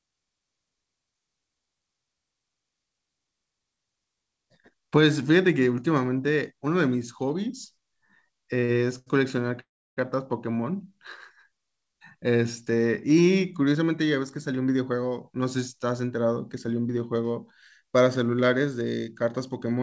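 Short stalls from late packets come first, at 8.60 to 8.64 s, 8.64 to 8.71 s and 8.99 to 9.08 s. Each time the jitter buffer ran dry and the last sound was stretched by 24, 42 and 79 ms, so the speech sags and holds briefly before resuming without losing anything. Unlike a freeze, none of these goes silent.

A call audio freeze follows from 9.60 to 9.99 s, likely from packets held up in transit. The held sound buzzes and fades, then about 310 ms of the 365 ms gap is silence before speech picks up where it stopped. That silent stretch is what separates it from the short stalls.

A jitter buffer speed-up runs from 13.66 to 14.98 s. Pitch-period-sized slices, roughly a tenth of a second in total, were cut to drain the excess delay. The speech runs at 107% and sounds hurried while its pitch stays put, which is what separates it from a resampling error. Throughout, the G.722 call path leaves nothing above 8 kHz.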